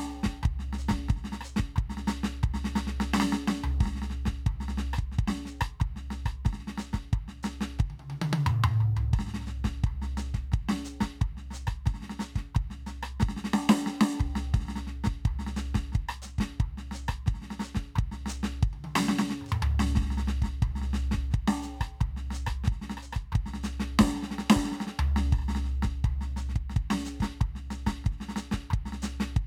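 No technical faults can be heard in this music clip. Nothing in it breaks up, drops out or distorts at any point.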